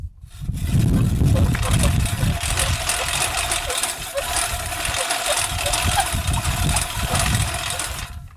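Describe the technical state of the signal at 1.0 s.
At 1.0 s the signal is intact, with no audible fault at that moment.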